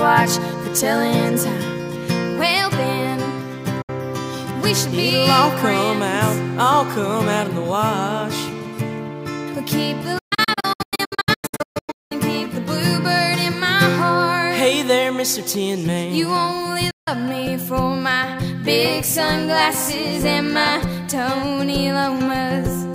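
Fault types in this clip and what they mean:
digital broadcast dropout: The sound quickly fades to silence in short gaps near 3.8 and 16.9 s and in a scattered run of holes from 10.18 to 12.12 s, then returns. The receiver lost signal or rejected corrupt frames and muted, losing that material.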